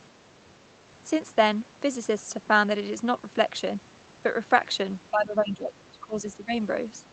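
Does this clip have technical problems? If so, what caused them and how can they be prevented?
Yes. From 5.11 to 6.52 s the speech is suppressed in double talk. The level sinks by about 20 dB at its deepest, over roughly one and a half seconds. The likely cause is that the far side spoke at the same time. The echo canceller could not tell this talker from the loudspeaker echo, so it pulled both down. A better-converged echo canceller with proper double-talk detection and a less aggressive suppressor would prevent this.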